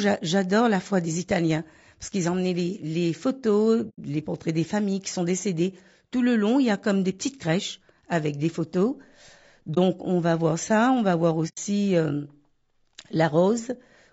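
From the start the speech sounds rough and grainy, with noise between the harmonics and a thin, synthetic top, likely low-delay AAC compression at a low rate such as 32 kbps, not broadband noise.

AAC frame loss with muting leaves a soft-faded hole at 3.89 to 3.99 s, a brief dip at 9.74 to 9.78 s and another soft-faded hole at 11.48 to 11.59 s. The first and last points to three lost frames, the middle to one. They fade out and back in rather than cutting off, unlike hard dropouts.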